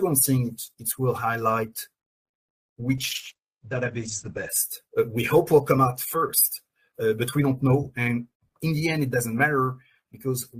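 From 2.99 to about 4.55 s there's a call bitrate drop: the encoder got squeezed, consistent with roughly 64 kbps falling to around 9, so the top end collapses from 20 kHz to 8 kHz. For about 1.5 s the sound goes muffled and rough, then clears.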